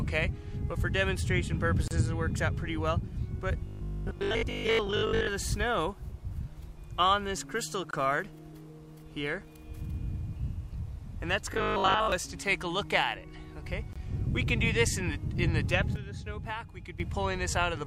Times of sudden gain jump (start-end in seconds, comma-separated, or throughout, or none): 15.96-17.00